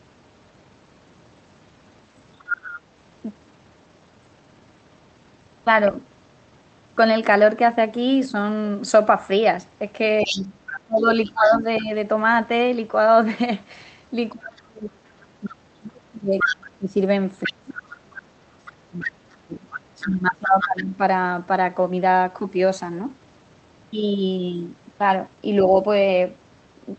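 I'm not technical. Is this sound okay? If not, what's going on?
No. The call's echo cancelling, which should stop the other person's voice from the speaker getting back into the microphone, likely missed some of it. This is the other side's voice leaking through: a second voice appears briefly at 2.39 to 2.8 s, more quietly at 10.2 to 11.83 s, and fairly loudly from 15.45 to 20.82 s.

There is also speech suppressed in double talk. When both people talked at once, the system likely couldn't tell the main talker from the echo and turned everything down. The main voice drops sharply, fades or breaks up from 10.22 to 11.9 s and again, more deeply, through much of 14.33 to 21.0 s.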